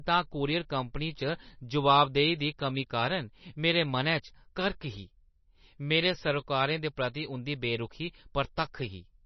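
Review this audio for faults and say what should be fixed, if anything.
Throughout the speech, nothing is heard above 5.9 kHz and the sound is heavily watery and swirly, likely from MP3 compression at a bitrate near 27 kbps. Starved of bits, the encoder cuts the treble and zeroes weak frequency lines that flicker frame to frame. That flicker, plus chirpy s sounds and smeared attacks, separates it from a simple low-pass filter. Encode from the original at a much higher bitrate, or use a lossless format.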